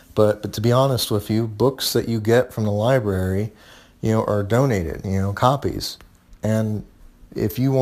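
Crude rate conversion runs through the whole clip. The speech appears to have been moved from 44.1 kHz to 48 kHz by simply repeating the nearest sample rather than filtering. At that ratio a duplicated sample falls in a regular pattern, and the resulting error forms shifted, inharmonic copies of the speech, roughly 25 dB below it. The effect is a gritty, inharmonic fizz riding on louder syllables and bright sibilant sounds.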